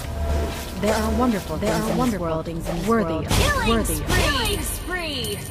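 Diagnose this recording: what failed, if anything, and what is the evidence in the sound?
The audio is a doubled audio track throughout. Every event is heard twice. A second, full-band copy trails the first by roughly 0.7 s. It is about as loud as the original. The copy carries no reverb tail or room colouring. It is a clean duplicate, not an echo. The stage is likely capture or routing at the driver level, where a slower second path records the same source. An edit holding two offset copies would sound the same.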